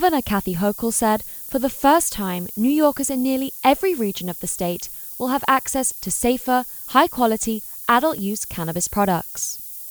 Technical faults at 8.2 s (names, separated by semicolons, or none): low bit depth with noise shaping; overlap between stream segments